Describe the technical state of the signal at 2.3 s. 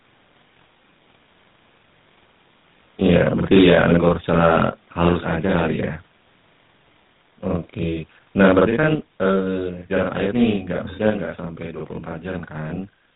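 At 2.3 s the speech has a distinct doubled quality, as if every syllable were struck twice in quick succession, the second hit arriving at the same loudness as the first. This is channel delay (doubling): one channel runs about 46 ms behind the other, which fits a 2048-sample buffer, and when the two are summed to mono the late copy stands apart as a short slap rather than blending in. It runs through the whole clip, including this moment.

The same stretch also sounds rough, muffled and warbly, with nothing at all above 3.9 kHz. That points to tandem speech coding: the call appears to have passed through a chain such as G.726 at 32 kbit/s, then G.711 A-law, then GSM full rate at 13 kbit/s, so the audio was decoded and re-encoded at each hand-off. The final GSM coder had to work on sound already degraded by the G.726 stage, and its losses stack on top of the earlier ones. This too is present throughout, 2.3 s included.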